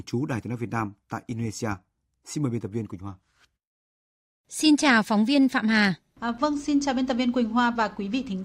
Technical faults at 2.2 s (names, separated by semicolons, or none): none